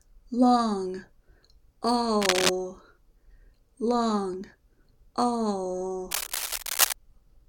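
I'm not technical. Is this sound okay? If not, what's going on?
No. There is cable scratch noise from 2.21 to 2.50 seconds and again from 6.11 to 6.93 seconds, the second burst lasting nearly a second. Each time, a rough scratching, crackly rustle sits on top of the sound, about as loud as the sound itself. The likely cause is a worn cable, plug or knob being moved, so that the electrical contact flickers rapidly and sprays uneven bursts of noise into the signal.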